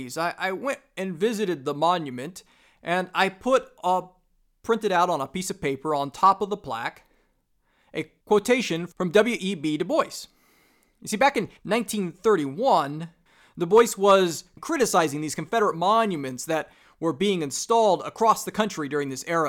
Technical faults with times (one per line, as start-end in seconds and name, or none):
6.24-6.30 hard clipping
13.77-14.15 hard clipping